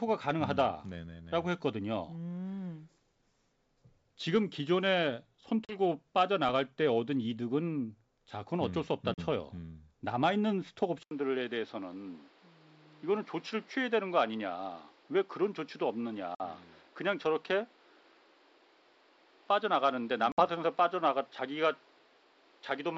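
At 5.65 s and again at 9.14 s the speech drops out in a hard-edged hole of about 40 ms each time. This is packet loss on an ADPCM call. The missing audio was filled with silence, and the receiving decoder's adaptive predictor and step size lost track of the sender's. When the sound resumes it comes back slightly distorted, and it settles over the next few tens of milliseconds.

From 11.03 s to the end there is an 80 ms silence followed by a sudden change of character. The speech turns duller and boxier, with nothing above 5.9 kHz, and a new background noise sits roughly 30 dB below the speech. The loudness stays about the same. The likely cause is an input switched to a poorer device, such as another microphone or a headset's call profile, which passes a narrower band and has its own noise floor. Before the switch, the G.722 wideband telephone coding shows clear speech up to about 7 kHz, as expected at 64 kbit/s.

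On this narrower input, the same packet loss on the ADPCM call recurs at 16.35 s with a gap of about 50 ms, and at 20.32 s with a gap of about 60 ms. Both give the same abrupt silence followed by a slightly distorted restart that takes tens of milliseconds to recover.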